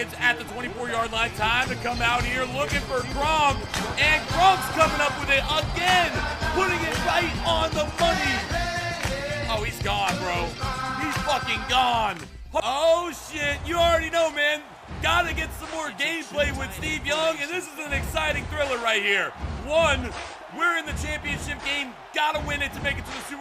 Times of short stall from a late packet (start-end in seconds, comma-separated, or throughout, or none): none